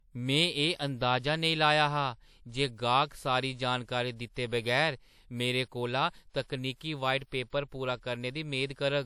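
From start to finish the speech has nothing above 18.8 kHz, and it looks like low-bitrate audio saved at a high bitrate, likely a low-rate WMA re-saved as high-rate MP3.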